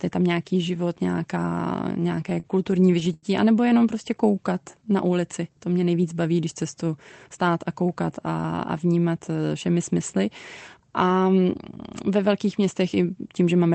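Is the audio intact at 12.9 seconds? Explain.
Yes, the speech at 12.9 seconds is intact, with no dropout, glitch or other fault at that moment, only the usual band-limited sound of the call codec.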